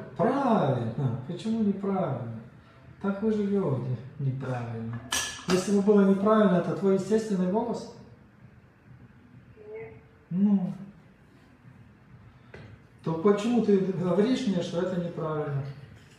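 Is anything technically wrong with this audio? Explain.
No, there's nothing technically wrong here that I can hear; the audio just runs along without a single hiccup.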